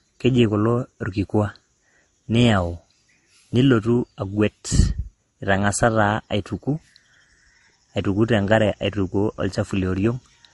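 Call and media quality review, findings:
Transcoding between lossy codecs, whole clip: stacked smearing plus swirly artefacts on the speech, nothing above 11.3 kHz. Likely an Opus leg at around 32 kbit/s re-encoded to MP3 near 48 kbit/s; MP3 piles its own damage onto the Opus artefacts.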